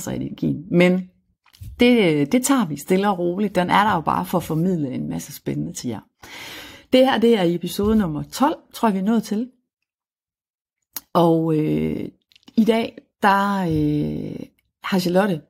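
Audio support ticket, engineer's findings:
No audible faults found in this speech recording.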